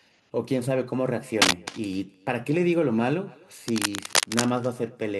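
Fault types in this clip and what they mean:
Echo with no canceller, throughout: every phrase is trailed by a faint, thinner copy arriving roughly a third of a second later, at about 25 dB below the direct speech. The far end is evidently playing the call through a loudspeaker that its microphone picks up, and nothing strips that returning signal out, so the talker's own voice travels back across the network path and lands on top of what follows.
Cable scratch noise, 1.42 to 1.68 s and 3.68 to 4.45 s: dense, irregular bursts of scratchy rustling sit over the speech, a little louder than the speech in the first burst and about as loud in the longer second one. This is likely a worn cable, connector or control being moved, its contact resistance jumping rapidly and turning those fluctuations into uneven crackle riding on the signal.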